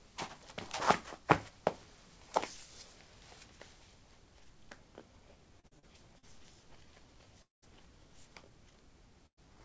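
From 5.60 to 6.26 s the everyday sound turns choppy and robotic. This is repeated packet loss: four short holes, the longest about 42 ms, each patched by stretching the preceding sound before the next hole arrives. Concealment fills roughly a fifth of the span. Unlike a single burst, the damage is a rapid string of small gaps rather than one missing chunk, which gives the stuttering, mechanical texture.

At 7.43 s the sound smears into a brief held tone that fades, and then about 180 ms of near silence follows until audio resumes at 7.65 s with roughly 200 ms absent. The likely cause is a long network dropout, where nothing arrives and the receiver runs out of material to extend. It differs from repeated loss because it is one continuous gap, and from a short burst because most of it is empty rather than concealed.

At 9.26 s a burst of packet loss removes about 120 ms. The last sound is carried forward and turned down, and a short quiet stretch of about 90 ms follows before the audio picks up again at 9.40 s. 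It is a single gap, shorter than the dropout, with a brief fading tail instead of a long silence.

Throughout, the call path's G.722 coding leaves nothing above 8 kHz.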